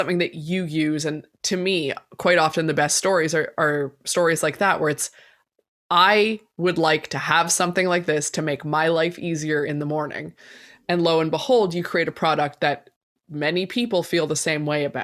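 No technical faults can be heard anywhere in the speech. Nothing in the sound points to a problem in how it was captured, processed or delivered.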